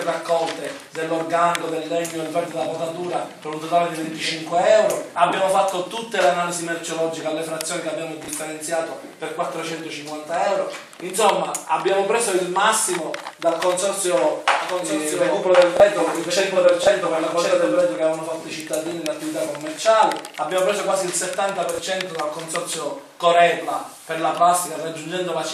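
From 14.61 s to 17.81 s there is a doubled audio track. A second, slower capture path or an edit that left two copies out of step has likely fed the same audio into the mix twice. A full-band duplicate runs about a second behind the original and about 5 dB quieter. It is dry, with no decay or room colour, and it cuts in and out abruptly at both ends of that span.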